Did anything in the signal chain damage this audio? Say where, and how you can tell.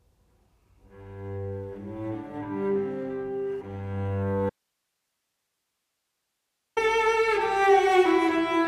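Yes. An audio dropout to a faint residue runs from 4.50 to 6.77 s: the signal cuts abruptly and 2.27 s of hiss, about 55 dB down, remains. It is likely an upstream analogue break with a live downstream path. The waveform collapses to a thin band, and the spectrogram shows flat, faint broadband noise.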